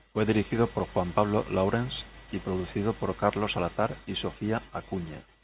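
Nothing's actually wrong with this bit of speech, which has come over a phone-style call line that stops everything above 4 kHz, just as that line normally does.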